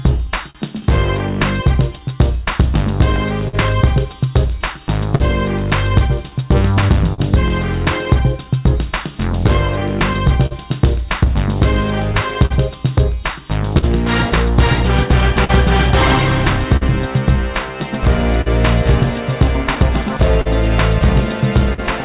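The audio came through a call path. Nothing reaches above 4 kHz, which fits a narrowband codec such as G.711 A-law at 64 kbps. Clock drift between sender and receiver runs through the whole clip. The sender's clock is slow by around 3 percent. The receiver's jitter buffer therefore keeps draining and must be topped up. Repeated timing corrections follow from 0.27 to 18.04 s. The receiver repeats short pieces of sound, adding roughly a tenth of a second in total. The edits are unevenly spaced. A short stall from a late packet comes at 0.50 to 0.57 s. The buffer ran empty, and the last sound was stretched for 43 ms until the packet arrived. Nothing is lost, but the sound hangs briefly, and the delay grows by 43 ms. Scattered short gaps appear from 2.50 to 7.20 s and again from 9.47 to 21.80 s. The first stretch has about seven and the second about fifteen. Each was patched by continuing the previous sound, none longer than about 50 ms. 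They are heard as small ticks and smears.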